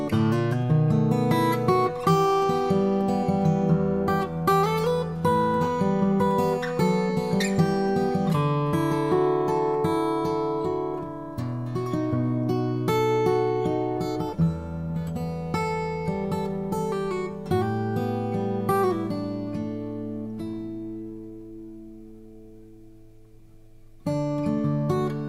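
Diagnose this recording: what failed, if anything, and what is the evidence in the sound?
No fault found in this recording.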